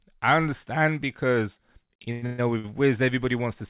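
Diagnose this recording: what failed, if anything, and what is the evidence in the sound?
Repeated stalls (stutter) at the network jitter buffer, 2.02–2.66 s: five late-packet gaps, longest 122 ms, were filled by extending earlier sound. This shows as smeared, repeating spectrogram frames.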